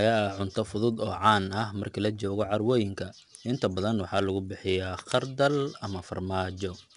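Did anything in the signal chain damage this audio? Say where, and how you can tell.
Yes, at the codec stage: this speech has been through 4-bit ADPCM compression for the whole clip. You hear a gritty hiss riding on every loud syllable, rising and falling with the level, plus roughness on sharp onsets where the adaptive step can't grow fast enough to keep up. Nothing comes through above 10.7 kHz, so it sounds dulled, which fits a low sample rate and a bitrate somewhere near 89 kbps.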